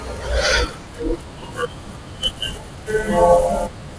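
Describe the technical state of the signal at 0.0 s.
At 0.0 s the signal is intact, with no dropout, clipping, distortion or other fault audible at that point.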